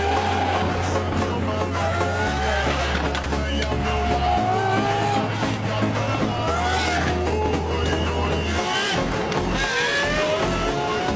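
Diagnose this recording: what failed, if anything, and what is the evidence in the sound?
At 3.24 s there's a tiny hole, about 20 ms, where the sound drops out and a short patch of flat, steady noise sits in its place before things pick up again. That's most likely sound dropped by the voice detector in the call processing stage: the sender judged that slice to be background and stopped sending, and the receiver filled the gap with comfort noise. The call path's usual 8 kHz ceiling is present throughout.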